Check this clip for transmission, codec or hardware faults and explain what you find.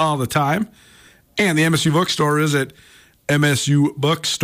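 Nothing faulty turns up anywhere in this speech recording.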